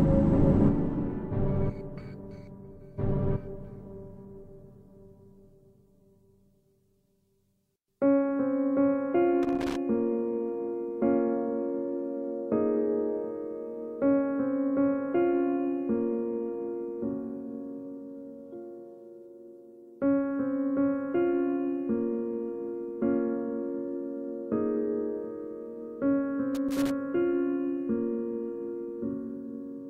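Loose connector crackle appears from 9.43 to 9.76 s and again from 26.55 to 26.91 s: a worn or dirty contact in the signal path is rapidly making and breaking, chopping the audio into an irregular scratchy burst.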